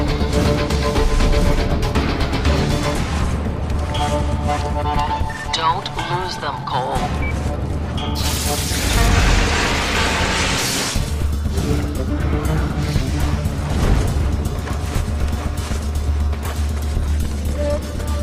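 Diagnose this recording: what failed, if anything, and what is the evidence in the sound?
Nothing failed, and the sound gives no evidence of any fault in this recording.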